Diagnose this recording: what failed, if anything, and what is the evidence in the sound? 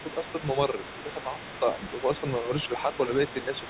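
Call processing stage: the echo canceller likely left residual loudspeaker signal in the microphone feed. The other side's voice leaks through for the entire clip, a faint second voice sitting about 15 dB below the talker, heard through the G.711 narrowband sound that stops at 4 kHz.

Call processing stage again: with both sides talking at once, the canceller likely could not tell the talker from the echo and turned both down. Speech is suppressed in double talk between 2.68 and 2.92 s, dipping a few decibels in short patches totalling about a tenth of a second.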